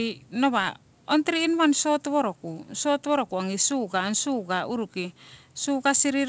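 No faults found in the speech; the top end stops at 8 kHz, which fits a wideband call codec on a normal WebRTC call path.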